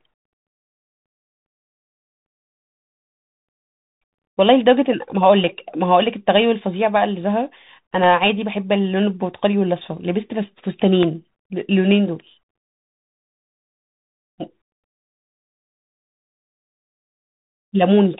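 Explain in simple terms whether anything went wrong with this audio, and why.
The speech went through a Bluetooth CVSD headset codec, a phone-quality link that keeps nothing above about 3.8 kHz and tracks the sound only in tiny up-or-down steps. That leaves the voice muffled, with scratchy s sounds, harsh loud parts and a grainy hiss underneath.

There are also two loud pops, at 8.04 to 8.06 s and at 11.03 to 11.05 s. A sudden electrical jolt, likely from a connector, a switch or a brief driver glitch, gets added to the signal. Each jolt is a sharp crack over the speech, which carries on underneath. The second is louder.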